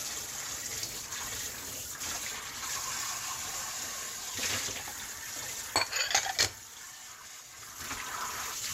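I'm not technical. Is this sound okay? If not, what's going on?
Yes, no faults are audible.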